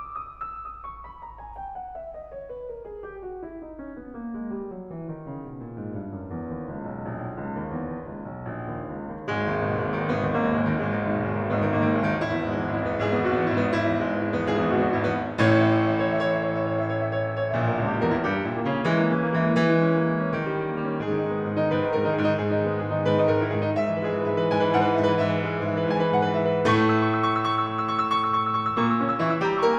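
Nothing technical goes wrong anywhere in this music, so there's no fault to point to.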